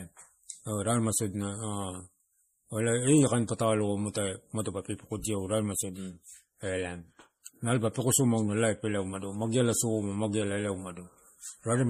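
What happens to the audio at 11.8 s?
At 11.8 s you're still hearing the MP3 compression that runs through the whole speech clip, likely at a low bitrate around 40 kbps. Starved of bits, the encoder drops weak frequency lines frame to frame, so it sounds plainly watery and swirly, with nothing above 15.2 kHz.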